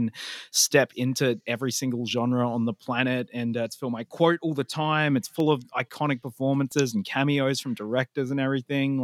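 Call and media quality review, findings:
CD scratch ticks in the speech, 5.40 to 6.72 s: nine short regular ticks, about seven a second, each only a few milliseconds. Likely a scratch on the disc beating error correction once per turn, with the player patching over the lost samples.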